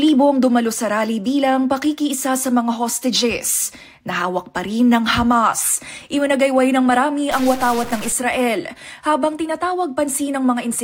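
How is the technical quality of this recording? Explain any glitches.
One clear fault. From 7.31 to 8.12 s there is a stuck bit, likely a data bit held at a fixed value by a broken line or converter. About half the samples are pushed off by a step of roughly -25 dBFS, producing harsh, buzzy distortion and filling quiet moments with noise.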